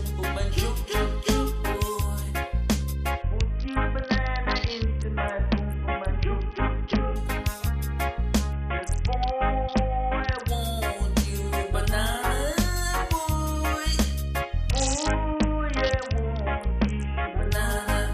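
Three stretches turn dull and gritty, from 3.22 to 7.16 s, 8.53 to 10.48 s and 14.70 to 17.51 s, with the treble falling away and a grainy noise riding on the sound until clarity snaps back. That is a Bluetooth SBC bit pool drop: the link congested and the encoder cut its bit budget, a fall that fits a bit pool going from 31 to 6, near 55 kbps, starving the top sub-bands and coarsely quantising the rest.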